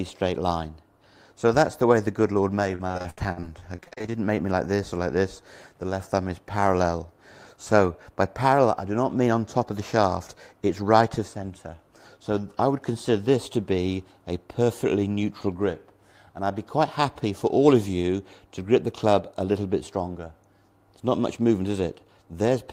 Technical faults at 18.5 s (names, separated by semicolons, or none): none